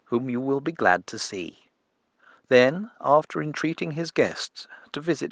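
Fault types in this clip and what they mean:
No faults found.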